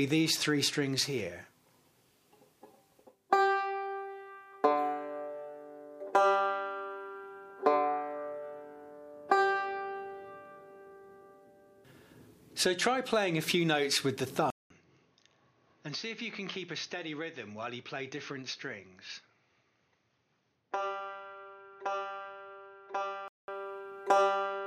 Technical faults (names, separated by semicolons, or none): input switched to a poorer device